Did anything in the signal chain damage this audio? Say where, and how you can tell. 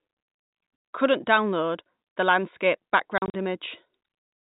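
Yes, packet loss filled with silence, at the network stage. The speech cuts to dead silence from 0.76 to 0.84 s, and again after "download landscape" from 3.18 to 3.34 s in scattered holes up to 40 ms. The gap sizes fit 20 ms packets. The receiver inserted silence instead of concealing the loss, leaving hard edges.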